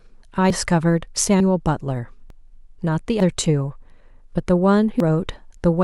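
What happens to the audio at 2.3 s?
At 2.30 s the speech jumps forward abruptly: roughly a tenth of a second of sound is gone, and the material on either side is butted together with no gap. This is audio missing between chunks. The likely cause is a recorder or processor handling the audio in 1.0 s blocks and dropping a short stretch while it closes one block and opens the next, so the speech skips rather than pausing.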